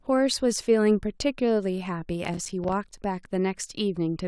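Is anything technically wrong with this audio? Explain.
Yes. From 2.25 to 2.98 s the speech crackles and tears. This is processor overload crackle: many buffers of a few milliseconds each missed their deadlines, and each dropped out as a hard-edged silent gap.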